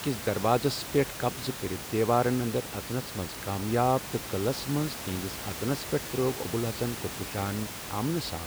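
No technical faults are audible.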